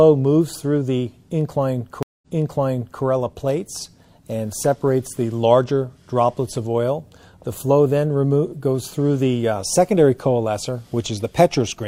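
At 2.03 s the audio drops out for about 0.2 s, then resumes roughly 0.8 s earlier, so a stretch repeats until 3.03 s. This is a stream reconnect: the connection broke, the player restarted its decoder mid-stream, and the server resent buffered audio.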